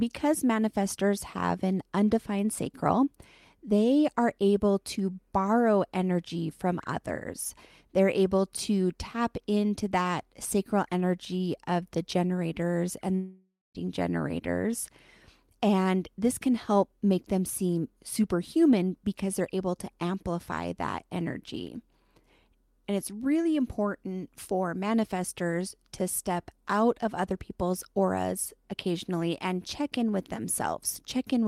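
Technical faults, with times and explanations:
13.15 to 13.77 s, long network dropout: right after "of the generators and" the speech breaks off, and what follows is a buzzy continuation of the last sound that decays, then about 0.23 s of near-silence before speech resumes. This is likely a gap in packet arrival: the receiver concealed the missing stretch by extending and fading the previous audio, and the roughly 0.6 s of speech that never arrived is simply skipped on return.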